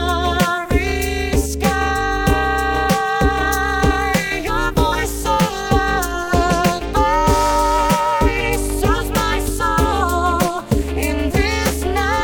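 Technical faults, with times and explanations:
Throughout, overlap-add ripple. The audio was split into windowed frames and rejoined with overlaps that never add up to a steady gain. The level dips by about 60 dB once per frame, around 300 times a second. The sound takes on a harsh, robotic, metallic buzz with extra tones around each note.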